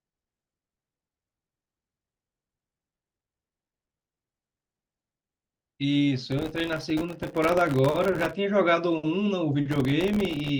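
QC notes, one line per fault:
6.31–8.33 s, processor overload crackle: a dense burst of gritty tearing over the speech. Many very short buffers, around a millisecond or two each, miss their deadlines in quick succession and play out as silent gaps with hard edges, so the dropouts merge into crackle.
9.71–10.49 s, processor overload crackle: a shorter, thinner recurrence of the same silent-gap crackle that stops when the load eases.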